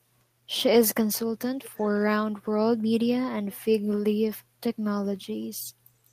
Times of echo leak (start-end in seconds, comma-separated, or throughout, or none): 1.62-2.03